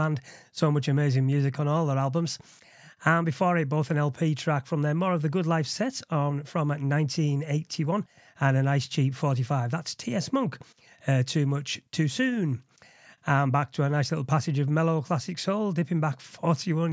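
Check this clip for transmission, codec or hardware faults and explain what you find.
No transmission, codec or hardware faults.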